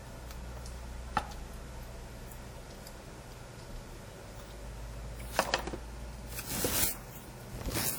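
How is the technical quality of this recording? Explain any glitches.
The quality is held back by clear codec damage across the whole recording. The WMA compression artefacts run from start to finish. A transform codec like WMA 1 is the likely cause, working at a rate that fits about 48 kbps. Its long blocks smear quantisation noise over tens of milliseconds. Weak detail gets zeroed. The sound turns ringing and washy, with a hiss that breathes along with it. Content still extends up to 20.1 kHz.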